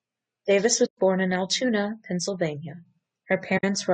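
Low-delay AAC compression is the likely cause of the roughness heard throughout the speech: a grainy texture, noise filling the gaps between pitch harmonics, and a thin, synthetic top band. Short coding frames resolve harmonics poorly, and the damage fits a low bitrate near 32 kbps.

AAC frame loss with muting opens holes from 0.85 to 0.98 s, about 120 ms, and from 3.57 to 3.64 s, about 60 ms. Lost frames were decoded as silence, and the overlapping windows fade the sound out and back in, leaving soft-edged gaps.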